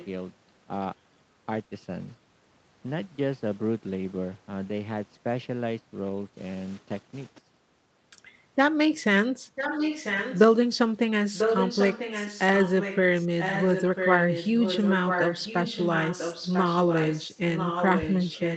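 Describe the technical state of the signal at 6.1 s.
At 6.1 s there is a lost packet rebuilt from error correction. It runs from 6.09 to 6.23 s. About 80 ms of speech there is a reconstruction, which fits four lost 20 ms packets. There is no gap. Each following packet carried a low-bitrate backup copy of the missing one, and the Opus decoder played that copy instead. The result is a short stretch that sounds rougher and noisier than the surrounding speech.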